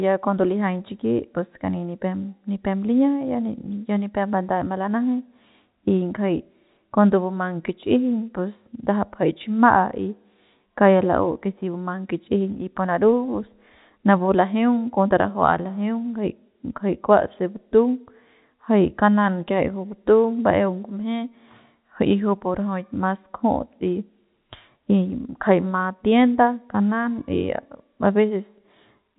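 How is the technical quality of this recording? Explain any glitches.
No glitches; the audio is intact throughout.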